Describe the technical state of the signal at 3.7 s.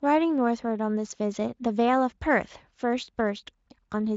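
At 3.7 s the speech is intact, with no audible fault; it passes through the Speex codec at a high enough setting that any coding damage is faint at most.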